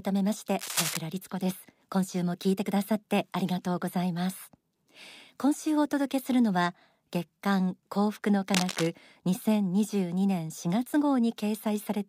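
At 0.59 to 1.00 s and again at 8.54 to 8.87 s, cable scratch noise cuts across the speech: dense, irregular crackling about 5 dB below the signal. It likely comes from a worn cable or connector being moved, its contact resistance fluctuating.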